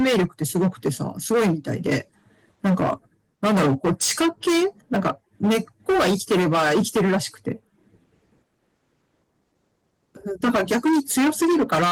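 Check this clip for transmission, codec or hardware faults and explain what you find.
Two faults are present: continuous hard clipping and a brief patch of chunks out of order. The speech also passes through Opus voice compression at 20 kbps in hybrid mode, whose light band-limiting and smoothing are not faults.

Hard clipping runs through the whole clip. The level is driven about 16 dB past what the stage can pass, flattening roughly a sixth of all samples. The squared-off peaks create high harmonics, so every loud syllable carries a harsh fuzz. Unlike codec distortion, this grit follows loudness, not bitrate.

Chunks out of order occur from 4.94 to 4.96 s. A 10 ms chunk arrived one chunk late and played after its successor, so the audio there swaps two short pieces. The hard joins give a tiny jumbled stutter. Unlike dropout or packet-loss concealment, nothing goes missing or gets filled in.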